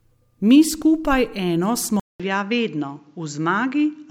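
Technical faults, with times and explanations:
2.00–4.10 s, input switched to a poorer device: after a 200 ms silence the speech turns duller and about 5 dB quieter, with nothing above 7.6 kHz and a faint new noise floor, likely from a change to a lesser microphone.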